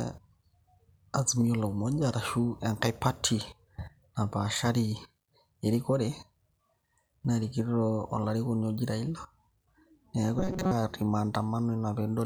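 Speech with robotic sound from repeated short buffers at 10.39 to 10.73 s: a rigid 188 Hz buzz, likely from a roughly 5.3 ms chunk looped as most audio went missing, showing as identical repeating waveform cycles and evenly spaced spectrogram harmonics.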